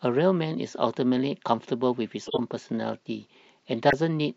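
A corrupt frame decoded runs from 2.26 to 2.40 s. The speech briefly turns into a chirp or burst of noise that has no relation to the surrounding sound. Damaged bits in a stretch of roughly five compressed frames were decoded anyway, so misread gains and spectral codes placed energy at the wrong frequencies. That error energy peaks at around -10 dBFS.

A corrupt frame muted follows from 3.89 to 3.94 s. The audio drops abruptly into complete silence for about 44 ms and then resumes with its timing intact. The decoder rejected the corrupted frames, and the player filled the gap with silence rather than attempting repair. The length of the hole fits roughly five short codec frames lost in succession, and the cut starts abruptly because the frames were replaced with silence.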